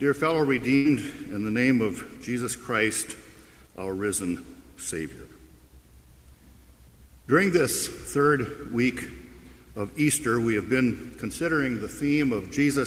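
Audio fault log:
0.75–0.87 s, burst of packet loss: a short run of consecutive audio packets never arrived in time, so the receiver had nothing to play for roughly a tenth of a second. It covered the hole by extending the last sound it had, about 94 ms of synthetic fill that decays as it goes, heard as a brief held, fading tail. Playback then picks up further along, with about 100 ms of the original sound skipped.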